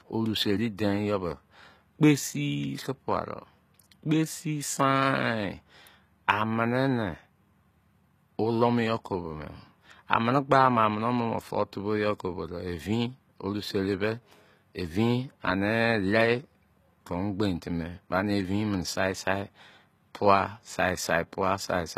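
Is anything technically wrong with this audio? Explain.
Yes. Throughout the speech, codec damage is plainly audible, most likely from HE-AAC compression at a low bitrate that fits roughly 20 kbps. Only the lower spectrum is truly coded; the treble is rebuilt by copying lower bands upward under a coarse envelope, so harmonics fail to line up across the crossover and s sounds come out gritty, metallic or lispy. A spectrogram shows repeated, pasted-looking upper patterns and a hard ceiling with nothing above 14.9 kHz.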